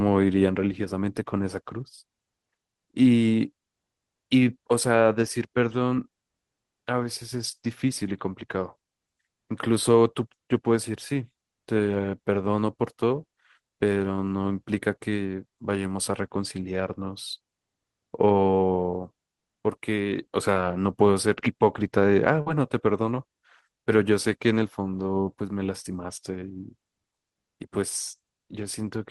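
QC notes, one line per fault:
5.96 s, short concealed packet loss. About 10 ms of speech arrived too late. The receiver extended the preceding sound to fill it, leaving a brief smear.
22.41 to 22.47 s, burst of packet loss. About 50 ms went missing at once. The last sound was held and faded for 48 ms. Speech then resumes slightly further on.
25.24 to 25.27 s, short concealed packet loss. 20 ms never reached the decoder in time. The previous sound was continued across the gap, heard as a brief smear before the real audio blends back.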